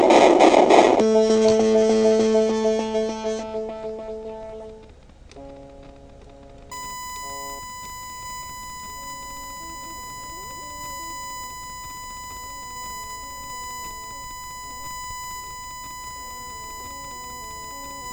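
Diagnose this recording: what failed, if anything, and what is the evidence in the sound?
USB whine enters through the analogue wiring at 6.71 s and runs to the end: a steady 1 kHz tone roughly 15 dB below the signal. A spectrogram shows a flat horizontal line at 1 kHz. It comes from the bus's 1 ms frame current leaking through a shared power or ground path.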